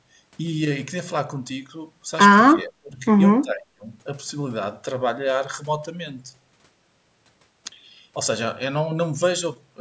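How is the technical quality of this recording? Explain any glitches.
The speech breaks up twice, from 2.54 to 3.03 s and from 3.42 to 3.86 s. This is likely speech suppressed in double talk. With both ends talking at once, the echo canceller treats this talker as echo and turns the signal down by roughly 25 and 30 dB. The voice dips and thins into fragments. On the waveform the envelope sags. On the spectrogram the harmonics fade, and the upper bands weaken. Band-limiting from the call microphone processing leaves nothing above 8 kHz throughout.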